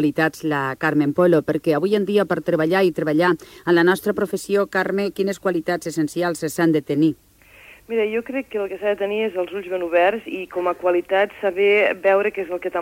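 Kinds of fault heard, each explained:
No technical faults can be heard in the signal, with no dropouts, glitches or other disturbances anywhere in the audio.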